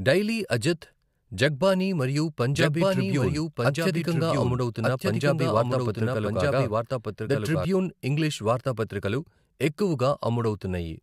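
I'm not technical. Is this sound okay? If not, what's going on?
No. From 2.55 to 7.65 s the speech has a doubled audio track. A second copy plays about a second behind, roughly as loud as the first. It starts and stops abruptly. This is likely the sound being recorded twice through a slower path.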